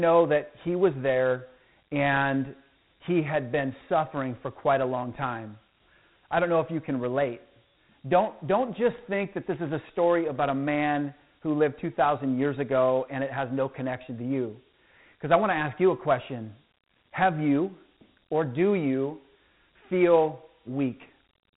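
Dialogic VOX ADPCM runs throughout: coarse 4-bit adaptive coding, consistent with 32 kbps, cuts everything above 3.9 kHz and leaves a gritty hiss trailing the speech.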